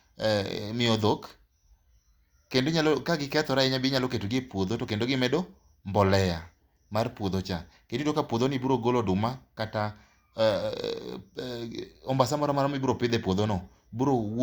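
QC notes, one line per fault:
No faults found in this speech clip. There is nothing to log against any time.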